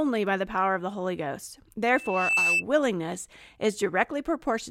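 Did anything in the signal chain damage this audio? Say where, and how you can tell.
Yes, there is a loudspeaker feedback squeal in the analogue stage, where a microphone is picking up the loudspeaker it feeds. From 1.95 s to 2.64 s a single tone at 2.6 kHz swells out of the speech over a little under half a second and ends up roughly 5 dB louder than the talker. It is not a steady interference whine because it grows by itself and then stops. That is the mark of the loop's gain passing one at that frequency.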